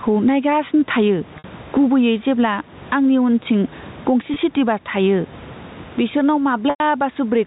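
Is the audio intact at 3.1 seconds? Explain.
No, loud and soft parts are pulled closer in level and the sound is squashed, a gain swing of around 15 dB, throughout the clip: gain pumping, likely from fast limiting on overdriven gain.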